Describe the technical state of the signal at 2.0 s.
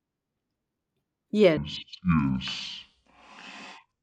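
At 2.0 s you're inside a section at the wrong speed, running from 1.57 s to the end at half speed, likely from the wrong clock, so the speech drags, deep and slow, about ten semitones down.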